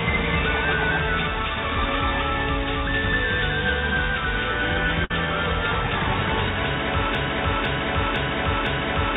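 At 5.05 s there is a burst of packet loss lasting to 5.12 s. For about 50 ms the receiver holds on to the last sound it had and turns it down, giving a brief buzz or hiss instead of new material. When playback picks up again, about 60 ms of audio has been skipped. The concealment fades and never repeats, which separates it from a loop. Like the rest of the clip, it sits in a band with nothing above 4 kHz, which fits G.711 A-law at 64 kbps.

From 7.15 s to the end of the clip, a broken-record loop takes over. A fragment of about 0.51 s repeats exactly, back to back, four times, and normal audio never returns. The likely cause is a stalled player, encoder or stream that kept sending the last piece it held. Unlike the packet loss, nothing fades or decays: each pass is a full-level, identical copy, and the fault lasts for seconds rather than a fraction of one.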